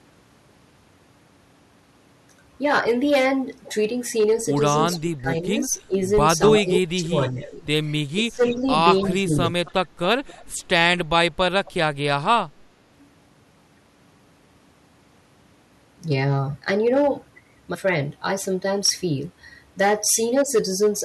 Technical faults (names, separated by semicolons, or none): hard clipping; echo leak; speech suppressed in double talk